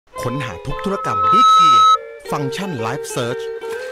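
A microphone hearing its own loudspeaker runs away at 1.3 kHz: loudspeaker feedback squeal from 0.77 to 1.98 s, a tone swelling to about 15 dB over the audio.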